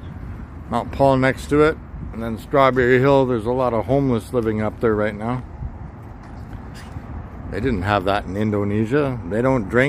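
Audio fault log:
No fault to log for this clip.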